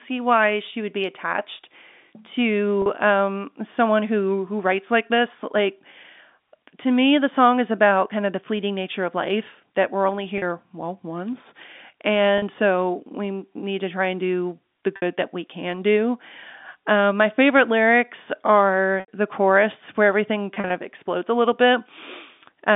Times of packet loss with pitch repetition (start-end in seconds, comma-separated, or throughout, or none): 2.82-2.86, 10.38-10.42, 12.38-12.42, 14.96-15.02, 19.00-19.08, 20.54-20.70